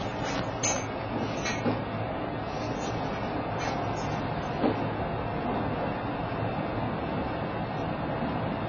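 Everyday sounds run dull and smeared throughout. Nothing survives above 7.1 kHz, and textures warble. That fits heavy AAC compression, likely AAC-LC near 16 kbps.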